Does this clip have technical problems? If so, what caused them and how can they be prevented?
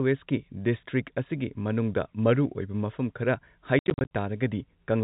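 Yes. Between 3.79 and 4.11 s, packet loss filled with silence cuts about 200 ms out of a 320 ms stretch in holes up to 70 ms long, sized in a way that fits 10 ms packets. The waveform shows flat gaps with vertical edges, and the spectrogram shows blank columns below the 4 kHz ceiling of the G.711 coding. Jitter buffering, forward error correction and concealment that fills gaps with interpolated audio would prevent it.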